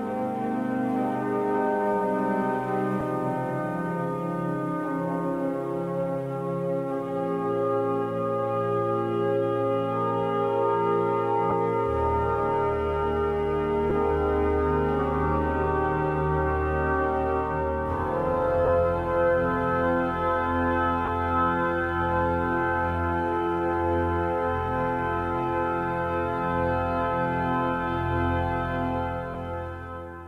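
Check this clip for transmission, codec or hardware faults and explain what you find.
The clip has one fault, lost LE Audio frames, occurring six times. Brief gaps fall at 3.00 s, 11.50 to 11.52 s, 13.90 s, 18.65 to 18.69 s, 21.05 to 21.09 s and 29.34 s. They last about 10, 20, 10, 30, 30 and 10 ms, which fits the loss of one to three 10 ms frames. The LC3 decoder covers each gap by replaying the last spectrum with randomised phase signs, so any tone in progress turns briefly into a noisy smear. On a spectrogram each event shows as a thin vertical strip where harmonic lines blur into diffuse broadband energy. In the waveform the periodic shape breaks into noise-like samples for those few milliseconds. The codec's normal coding loss is light.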